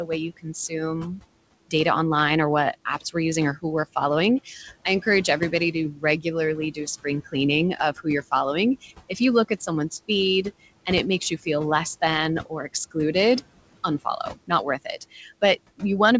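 A speech recording carries noise suppressor artifacts throughout. The room noise, sitting about 17 dB below the speech, is pushed down by about 21 dB in the gaps and swells back up under each phrase. On a spectrogram the background band looks patchy and blotchy, dark between phrases and filling in behind the speech, with isolated time-frequency specks where the gating flickers. The suppressor also mistakes parts of the speech for noise, giving speech cut by the noise suppressor in seven stretches: 0.04–0.73 s, 5.4–6.26 s right after "we're following I encourage", 6.72–7.35 s, 7.77–8.32 s, 8.82–9.69 s just before "feed and it makes", 12.45–13.15 s after "you feel less than", and 14.0–15.31 s. Only a small portion of each window is actually affected, a few hundred milliseconds at most, with drops reaching about 12 to 17 dB, deepest at the start and in the final stretch. Soft consonants and word tails sound swallowed there. 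On the waveform the envelope dips abruptly mid-syllable, and the spectrogram shows fricative energy and trailing harmonics fading out early. The spectrum stops at 8 kHz, which fits a G.722 wideband call path at 64 kbps.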